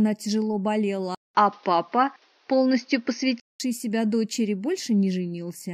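From 1.15 to 3.6 s, after a 200 ms flat gap, the sound dulls, with faint new noise and nothing above 6.5 kHz: likely an input switched to a poorer device.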